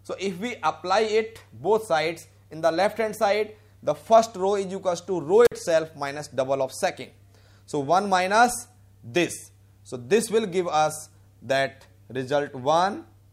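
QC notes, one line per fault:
5.45–5.52 s, intermittent contact: a loose connection opens for about 49 ms, crackling at both edges with faint hiss between, unlike a clean, silent digital dropout.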